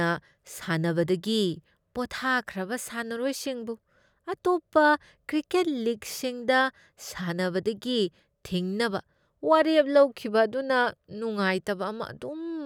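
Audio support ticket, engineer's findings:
No technical faults found in the speech clip. Nothing to escalate; closing ticket.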